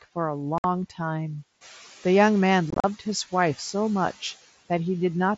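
Noise suppressor artifacts run through the whole speech recording, cutting steady background by about 10 dB frame by frame, so the remaining noise pumps between phrases. The room noise steps up by about 10 dB around one and a half seconds and stays about 19 dB below the speech. Unconcealed Bluetooth headset packet loss hits at 0.58 to 0.64 s, a single 60 ms hole with hard edges, which fits about eight dropped mSBC frames replaced by silence or an idle pattern. It strikes again from 2.70 to 2.84 s as scattered gaps totalling 97.5 ms, the longest 37.5 ms, giving a brief chopped, crackly roughness. The mSBC wideband link keeps speech bandwidth to 8 kHz with light graininess on louder sounds.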